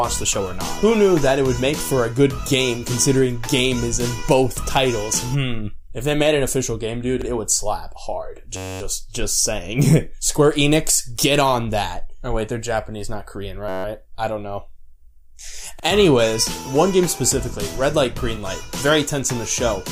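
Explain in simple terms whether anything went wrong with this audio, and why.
Twice the computer briefly froze while the sound hardware kept replaying the same tiny slice of its memory, which is a system hang loop. A piece about 10.7 ms long, which fits a 512-sample buffer, repeated 23 times from 8.57 to 8.81 s and 15 times from 13.69 to 13.85 s. Because the piece is so short, it comes out as a steady buzz at about 94 Hz rather than a stutter, and almost no audio goes missing.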